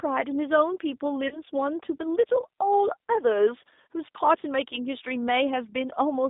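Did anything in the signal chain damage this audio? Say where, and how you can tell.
Yes. At the codec stage, the whole clip carries G.729 coding damage. The speech sits in a telephone band of roughly 250 Hz to 3.7 kHz, with nothing above it, and has a rough, slightly synthetic grain, which fits an 8 kbit/s G.729A stream. The decoder rebuilds each 10 ms frame from a vocal tract filter, a pitch predictor and a few pulses. That sparse, buzzy texture separates it from a plain low-pass filter or a wideband codec, which would sound duller but not synthetic.

At the network stage, there is VoIP packet loss concealed by the speech codec from 1.28 to 1.40 s. With no data arriving, the decoder extends its last pitch and filter at falling gain, so the speech smears into a fading buzzy tone or coloured noise rather than cutting to silence. The gap in audio fits about 30 ms lost, likely a single packet. 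The weakened, distorted stretch runs on past that because each frame builds on the previous one. A plain dropout would leave a hard silent hole with clicks instead.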